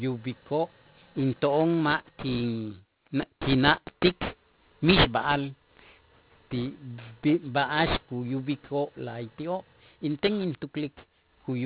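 Aliasing runs through the whole recording. The sample rate was cut without a low-pass filter first, which fits a drop to 8 kHz. Energy above 4 kHz folds back as false tones, only about 10 dB below the speech. Sibilants sound gritty and metallic.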